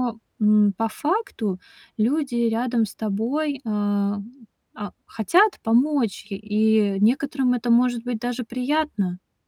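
From 0.12 to 9.47 s, clock slip clicks form a soft rattle roughly every 20 ms, likely unsynced clocks; single-sample waveform steps, faint vertical spectrogram lines.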